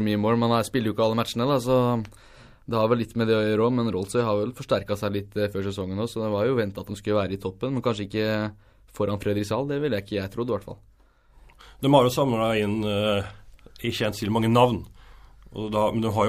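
No technical faults can be heard anywhere in this recording.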